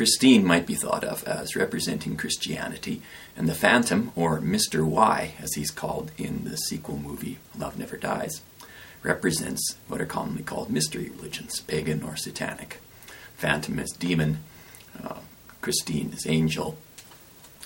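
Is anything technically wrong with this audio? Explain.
No, no technical faults can be heard here.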